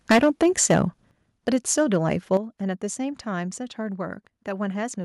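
From 0.1 to 0.85 s the speech breaks up with a harsh, crackling edge, microphone overload, the peaks likely driven about 14 dB past the converter's limit so that roughly a tenth of the waveform is flattened. At 0.12 s the microphone volume steps down by about 4 dB, likely the call software cutting input gain. At that drop voice and background fall together. A further step of about 7 dB follows at 1.11 s. From 1.48 to 2.37 s a milder overload, about 4 dB over with under one percent of samples cut, roughens only the loudest syllables, and the moment it ends at 2.37 s the level drops again by about 8 dB.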